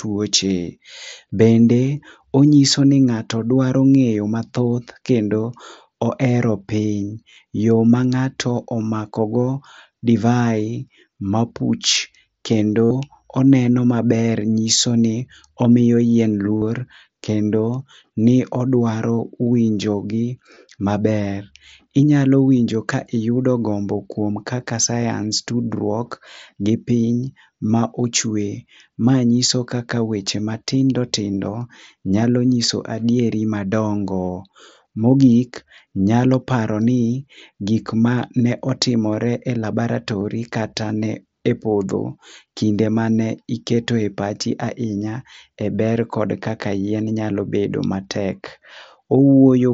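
Concealed Bluetooth headset packet loss occurs at 7.30 to 7.36 s (about 52 ms lost, scattered with a longest run of 30 ms), 12.85 to 12.91 s, 16.57 to 16.62 s, 20.55 s and 40.20 s. Packets between headset and phone went missing, and the receiver filled each gap by repeating the closest-matching piece of the preceding waveform. The three longer gaps sound like a brief buzzy tone at full level, with a slight warble as real sound resumes. The two 15 ms losses are much shorter. The mSBC headset codec adds a light graininess on loud sounds.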